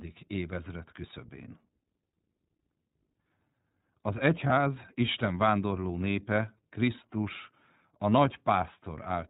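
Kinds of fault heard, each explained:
iLBC codec: The whole clip has been through the iLBC narrowband VoIP codec, which codes each short frame's excitation independently. Nothing above 4 kHz survives, so the speech sounds band-limited and muffled at the top. The coding damage is plainly audible as a rough, slightly synthetic texture on the speech. The character fits the 20 ms frame mode at about 15.2 kbps, the codec's higher-rate setting.
lost iLBC frames: Between about 4.48 and 4.53 s there is a brief dropout that the decoder has concealed. Instead of a silent gap, the last pitch cycle is repeated with some noise mixed in, so the missing stretch comes across as a very short held, slightly buzzy vowel. The 20 ms of missing audio is consistent with one lost frame. Because iLBC frames do not depend on their predecessors, the speech recovers cleanly immediately afterwards.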